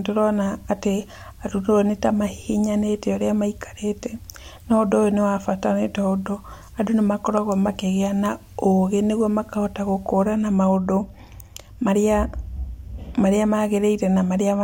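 From the start to 10.25 s the speech carries low bit depth with dither: the signal has been reduced to 9 bits, with random dither added before each sample was rounded. That randomises the rounding error into a steady, even hiss sitting roughly 40 dB below the speech. Undithered truncation would leave gritty distortion that follows the voice and collapses in pauses. Here the hiss stays constant through words and gaps, with no roughness on the speech itself.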